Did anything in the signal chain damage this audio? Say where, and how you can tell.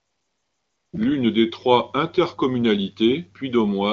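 Yes. From 0.00 to 0.93 s the opening is AMR comfort noise, inserted during call processing. Because the phone judged the line silent, it stopped sending speech frames, and the receiver synthesised a steady, smooth hiss from a coarse level and spectrum estimate. The real background disappears, and the noise switches off abruptly when speech frames resume. A noise gate would drop to near-silence instead, and a genuinely quiet room would keep its natural texture.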